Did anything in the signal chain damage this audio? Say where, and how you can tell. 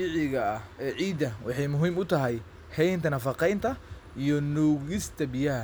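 No, nothing in the signal chain has left an audible mark on this speech recording. At no point can any stage be heard altering the signal.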